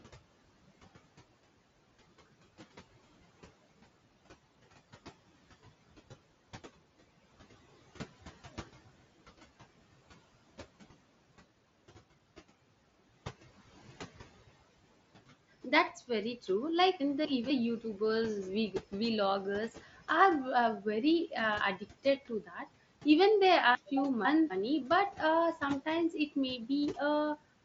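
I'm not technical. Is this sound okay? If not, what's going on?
No. There are three kinds of problems, though the room's own background noise, which is faint and sits well under the speech, isn't one of them.

Noise suppressor artifacts run through the whole clip. A filter that tries to remove background noise is working hard, so the noise drops away in the pauses and creeps back when someone talks. This is different from a problem at one moment: it's a constant pumping texture, present everywhere.

Chunks out of order happen twice. Around 17.0 to 17.5 seconds, a quarter-second slice of audio plays one slot too late, after the piece that should follow it. Again from 23.75 to 24.5 seconds, just before "but uh sometimes it", a slice turns up two slots late. Each time you hear a brief jumbled stretch. Nothing is missing, unlike a dropout, where sound simply vanishes. It's only shuffled.

Speech cut by the noise suppressor occurs from about 22.28 to 22.68 seconds. 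The same noise filter mistook part of the speech for background and turned it down, so roughly a third of a second sounds swallowed and faint. It doesn't go silent the way a dropout would, and unlike the pumping, which is everywhere, this is a single spot where the speech itself sinks.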